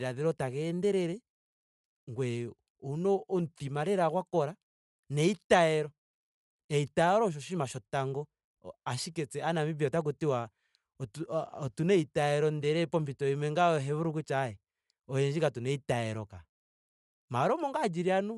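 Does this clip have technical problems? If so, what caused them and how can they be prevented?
Yes. Throughout the speech, a breathy, grainy edge and nothing above 11.6 kHz point to Bluetooth LC3 compression as the likely cause; noise-filled upper bands fit a low bitrate, around 48 kbps. Prevent it by recording over a wired link or raising the Bluetooth bitrate.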